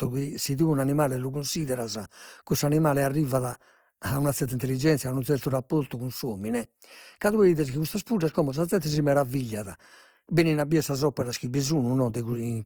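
Opus compression runs throughout the speech, likely from a low bitrate, which fits 24 kbps. Noise-filled bands make tones rough and grainy.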